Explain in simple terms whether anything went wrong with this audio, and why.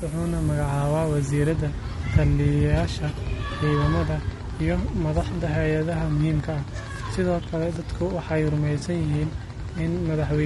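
The speech was likely squeezed through low-delay AAC compression, the fast codec used for video calls, which leaves the whole clip sounding rough and grainy with a thin, artificial top end.

For the first 1.5 s, the signal was stored with too few bits, and low bit depth with noise shaping pushed the rounding error upward, giving a steady, thin hiss.

From 2.89 s to 10.35 s, a train of clicks runs over the speech, about ten evenly spaced ticks a second, roughly seventy in all. It is likely from electrical interference or a faulty connection or power supply.

From 8.79 s to 8.83 s, one piece of the compressed stream went missing. AAC frame loss with concealment patched the 20 ms gap with a guess, leaving a brief smeared, noisy blip.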